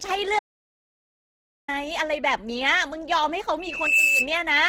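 Across the whole speech clip the audio carries the texture of low-rate Opus compression, likely in its CELT music mode. The encoder holds each band's energy and patches starved bands by folding lower content or filling with noise. So instead of swirling holes the voice turns grainy and rough, with a noisy sheen on voiced sounds. Bandwidth stays full, reaching about 20.2 kHz, and the damage is plainly audible, which fits a bitrate around 16 kbps.

At 0.39 s the sound drops out to silence and stays out until 1.68 s, a gap of 1.29 s. It is silent with no room tone at all, which points to the input being lost upstream while the recorder kept writing samples, most plausibly a disconnected link or momentary mute. Whatever was said during that stretch is gone, and the speech resumes abruptly mid-flow.

From 3.59 s to 4.30 s a loudspeaker feedback squeal rises out of the speech. It is a single tone at 2.6 kHz, where the microphone-to-speaker loop gain exceeded unity. 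It swells over roughly 0.4 s and peaks at about 5 dB above the speech level. Then it stops at 4.30 s, before the clip ends.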